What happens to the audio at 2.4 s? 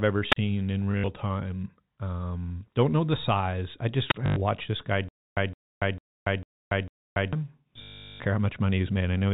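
At 2.4 s the speech is intact, with nothing breaking into or disturbing it beyond the narrow, telephone-band character of G.711 telephone coding that runs through the whole recording.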